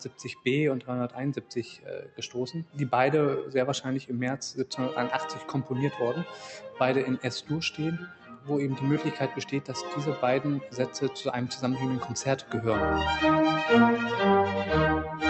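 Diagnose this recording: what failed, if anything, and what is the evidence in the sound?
Noise suppressor applied to music or sounds, throughout the clip, at the call-processing stage. A suppressor tuned for speech treats sustained tones and ambience as noise, so the level swings by about 10 dB. Attacks pass while held sound and tails sink, giving a pumping, thinning texture.

Sound cut by the noise suppressor at 0.0–0.46, 1.38–1.53, 1.77–2.21, 5.4–5.71, 6.64–6.8 and 8.06–8.49 s. Here the suppressor judged steady or decaying sound to be noise and pulled it down by about 10, 11, 11, 9, 6 and 10 dB respectively.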